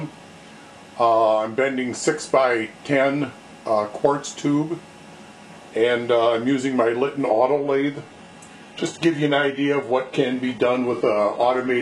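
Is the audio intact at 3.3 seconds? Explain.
Yes, the audio at 3.3 seconds is intact, with no dropout, click, distortion or other fault audible at that moment.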